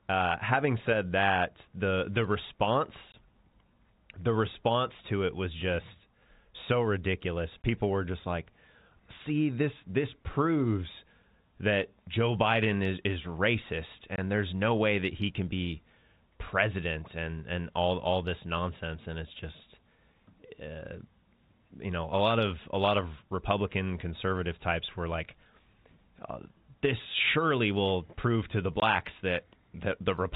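Speech carried over G.711 telephone coding, band-limited below 4 kHz, has four short dropouts from packet loss filled with silence, at 3.12–3.14, 7.62–7.64, 14.16–14.18 and 28.80–28.82 s. Each hole lasts 20 ms, consistent with one lost packet, and the receiver inserted silence, so each gap starts and ends abruptly.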